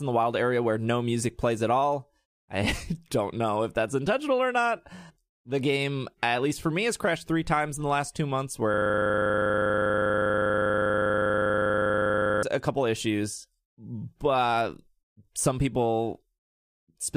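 After "the last two months", from 8.74 to 12.43 s, a system hang loop replays one 40 ms buffer, producing a steady 25 Hz buzz until "a couple issues but".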